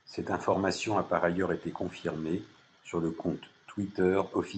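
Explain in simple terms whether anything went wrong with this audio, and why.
Nothing went wrong; the speech comes through as expected.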